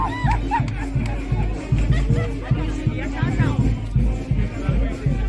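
Nothing goes wrong anywhere in this clip, so there's no fault to point to.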